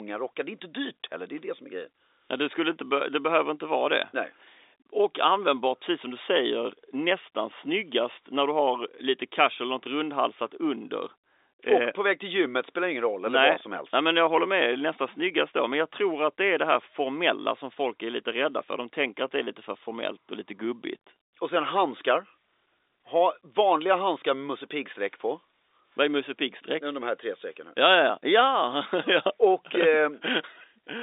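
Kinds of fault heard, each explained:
No faults heard; the speech sits in a telephone band of 300 Hz to 3.7 kHz with nothing above 3.8 kHz, as expected from G.711 telephone coding.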